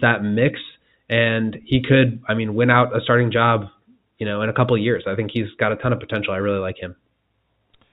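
No faults found in the speech; the G.711 mu-law telephone coding path is working normally, the band stopping at 4 kHz as that format dictates and any quantisation noise from it at most faint.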